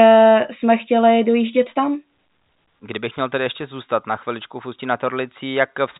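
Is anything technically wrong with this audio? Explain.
No, nothing's wrong here; it's just ordinary telephone-grade speech in G.711 coding, so it tops out around 3.8 kHz the way a landline call does.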